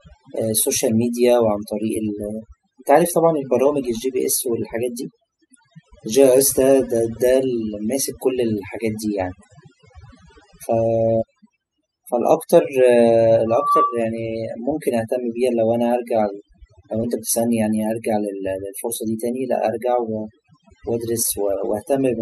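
Overdone noise removal runs through the whole recording: the suppressor pulls individual frequency bands down whenever they sit near its noise estimate, so the background falls to near silence dotted with twinkling specks. Unlike a plain low-pass or gentle gating, the damage flickers band by band rather than dulling evenly.

From 13.46 to 14.05 s a loudspeaker feedback squeal appears: the microphone picks up its own loudspeaker, and the loop gain at 1.2 kHz exceeds one. A single steady tone swells over roughly a third of a second to a few decibels above the speech. Its fixed pitch and self-building rise set it apart from an ordinary interfering tone or a whistle.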